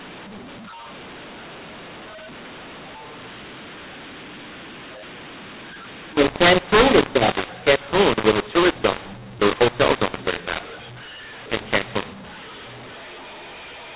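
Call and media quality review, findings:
mu-law and A-law mixed up, throughout. Harsh, gritty distortion on the speech; level jumps scrambled; pauses filled with noise, the quietest samples lifted well above silence. Probable component: G.711 decoder. Audio coded as A-law, decoded as mu-law. Band limit near 4 kHz fits an 8 kHz telephone path.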